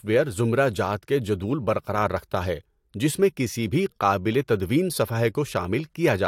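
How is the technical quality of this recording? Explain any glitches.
No technical faults are audible anywhere in the recording.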